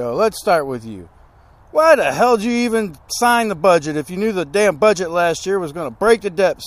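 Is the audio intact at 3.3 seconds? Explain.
Yes, the audio is intact at 3.3 seconds, with no dropout, click or other fault audible at that moment.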